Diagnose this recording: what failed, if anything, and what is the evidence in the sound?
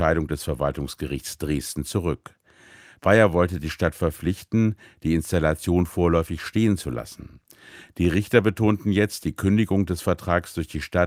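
Nothing failed here: the speech holds together throughout, with no audible point where any stage of the chain gave way.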